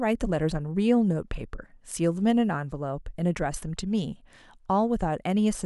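Listening to the speech in this recording, nothing technical stood out as a problem.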